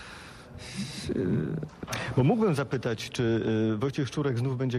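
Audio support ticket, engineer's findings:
Nothing stood out on listening that would point to a fault in any component of the audio path.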